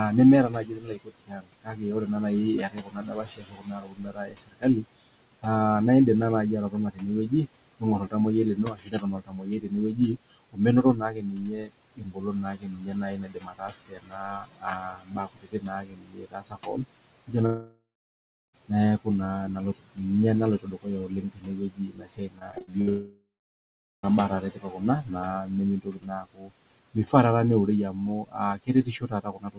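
Noise suppressor artifacts run through the whole recording. The suppressor treats the steady room noise, which sits about 16 dB below the speech, as something to remove and pulls those bands down by about 21 dB frame by frame. The background therefore sinks in the pauses and swells back under the talking.

Speech cut by the noise suppressor shows up from 0.11 to 5.45 s, 6.7 to 19.07 s, 19.75 to 20.0 s, 20.59 to 27.14 s and 27.92 s to the end. Here the suppressor mistakes quiet parts of the speech for noise and turns them down by as much as about 22 dB. Soft consonants and word endings sound swallowed, adding up to roughly three seconds in the first stretch, about seven in the second, a fifth of a second in the third and about three in the fourth.

A long network dropout runs from 17.46 to 18.55 s, likely caused by a run of lost packets. About 1.08 s of audio never arrives. The receiver stretches the last sound into a fading buzz, and then about 0.73 s of near-silence follows before the speech resumes past the gap.

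Repeated packet loss with a robotic sound follows from 22.39 to 22.89 s. Six short holes, the longest 60 ms, are each patched by repeating the preceding sound, so about a third of that half-second is concealment. The result is choppy.

A second long network dropout, likely from the same kind of packet loss, follows straight on from 22.89 to 24.05 s. About 1.14 s is lost: a decaying buzz, then about 0.79 s of near-silence before the audio picks up again further on.

The G.711 mu-law call path behind all of this carries nothing above 4 kHz, which gives the whole clip its narrowband telephone tone.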